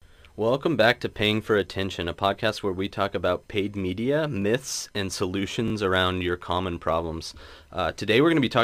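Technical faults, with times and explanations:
4.42–4.44 s, repeated buffer: new audio failed to reach the output in time, so the device replayed its last block once, which fits a 20 ms buffer. The same short slice of speech sounds twice with a hard join, heard as a brief click-like stutter. The stream then resumes where it left off, with essentially no audio lost.
5.68–5.72 s, repeated buffer: the same underrun happens again, but the 20 ms block plays two extra times, stretching the fault to 40 ms. The triple repeat with abrupt seams gives a short buzzy stutter rather than a single click. Again almost nothing is skipped afterwards.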